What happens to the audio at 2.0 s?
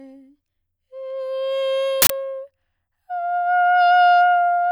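At 2.02 s the music is cut by an uninitialised buffer lasting until 2.1 s: an 80 ms block played before audio was written, so stale memory came out as a loud burst of digital noise, unlike a dropout, which would fall silent.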